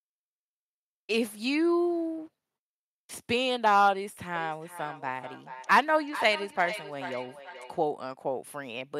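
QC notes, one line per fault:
4.35–7.81 s: feedback echo between two devices. The speech returns at a fixed gap of roughly 0.4 s, peaking about 12 dB below the original, because another device plays it back into this microphone. Unlike reverb, it is a distinct delayed copy.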